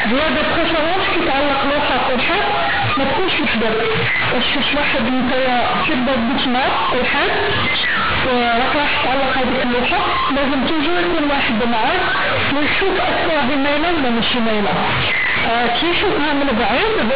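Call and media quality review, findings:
Companded audio read as linear, whole clip: harsh, very loud buzzy distortion, heavy noise in pauses. A-law bytes played as raw 8-bit samples without expansion, so quiet passages swing as large as loud ones. G.711 A-law 8 kHz path intact.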